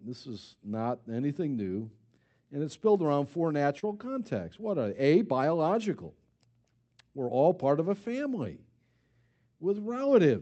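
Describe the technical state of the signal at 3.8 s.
At 3.79 to 3.85 s, right after "it's built around four", there is a short concealed packet loss. About 20 ms of the Opus call stream arrived too late to decode, so the receiver extended the preceding sound for roughly 30 ms and blended back into real audio. It is heard as a brief smeared wobble, not a hard click. Unlike a plain dropout, there is no silent gap; the hole is filled with invented continuation, all within the call's 8 kHz band.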